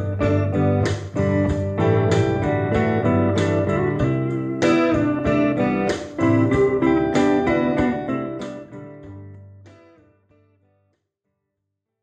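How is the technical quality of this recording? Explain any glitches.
Nothing here stands out as a glitch; the only change worth noting is the sound gently easing down from around 7.5 s to the end, like an editor's fade-out.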